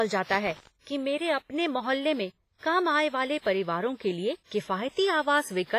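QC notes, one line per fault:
Throughout: WMA compression. The speech rings and sounds washy, with a hiss that breathes along with the signal, and the codec damage is heavy. Nothing is present above 15.5 kHz. The likely cause is long-block transform coding at a low bitrate, near 24 kbps.
0.31–0.67 s: loose connector crackle. An irregular burst of crackle and scratching lasts about 0.37 s. A worn or dirty contact makes and breaks rapidly as it moves, chopping the signal on and off, which produces this scratchy sound.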